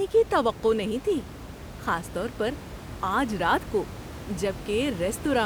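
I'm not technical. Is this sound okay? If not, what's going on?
Yes, no faults here; the only thing under the speech is the room's own background noise, which the microphone picked up and sits well below the voice.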